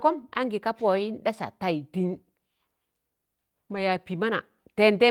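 At 3.71 s, the speech roughens briefly until about 3.77 s. This is a lost packet rebuilt from error correction. Audio went missing in transit, which fits two lost packets, about 40 ms of sound. The packets that followed carried low-bitrate copies of that audio. The decoder played those copies instead of leaving a gap. So the flow never stops. The patched stretch just sounds coarser and noisier than the speech around it.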